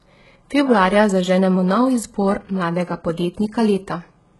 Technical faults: HE-AAC compression

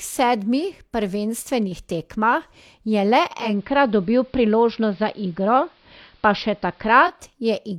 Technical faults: digital radio blending to analogue

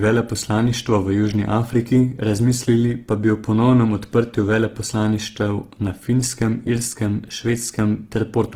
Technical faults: Opus compression

